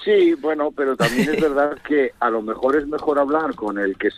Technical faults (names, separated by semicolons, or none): short stall from a late packet